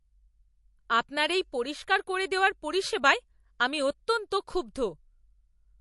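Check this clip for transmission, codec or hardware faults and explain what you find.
One codec fault runs through the whole speech clip. The sound is watery and swirly, with a metallic chirp on s sounds and smeared attacks, and nothing survives above 11.3 kHz. The likely cause is MP3 compression at a low rate, fitting roughly 48 kbps. Short of bits, the encoder cuts the treble at a fixed point and drops weak frequency lines that flicker on and off between frames, producing the swirl and chirps.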